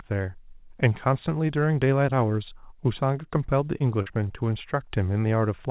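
Short concealed packet loss occurs at 3.78–3.82 s, 4.02–4.08 s and 4.28–4.32 s. About 20, 40 and 20 ms never arrived. The receiver extended the preceding sound to cover each gap. Each patch is a brief smear or wobble. The narrow band, with nothing above 4 kHz, fits a G.711 call path.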